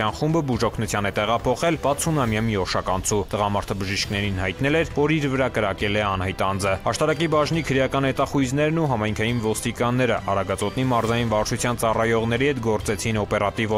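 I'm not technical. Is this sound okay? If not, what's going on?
No. There is a timing problem running through the whole recording. It comes from clock drift between sender and receiver. Every digital recorder and player keeps time with its own internal clock. Here the sending side's clock runs about 2% slow compared with the receiving side. The receiver gets sound a little more slowly than it plays it out. Its small waiting store of audio keeps running low, so it has to keep making up the difference.

You hear the fix as repeated timing corrections. From about 0.36 s to 13.54 s, the receiver keeps repeating tiny slices of sound to stay in step. They add up to roughly a third of a second of extra audio. The sound plays at about 98% of its proper pace. It may feel slightly dragged or unsteady. Small hiccups come at uneven moments, not on a regular beat.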